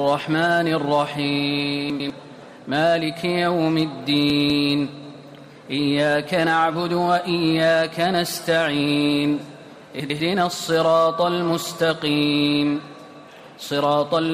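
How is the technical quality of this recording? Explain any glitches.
Three brief glitches mar the recording, all of the same kind: chunks out of order, at 1.9 to 2.1 s, 4.3 to 4.5 s and 10.0 to 10.2 s. In each, a 100 ms chunk plays one slot late, swapping places with its neighbour. Nothing is lost, but the sound jumbles momentarily at the three hard joins.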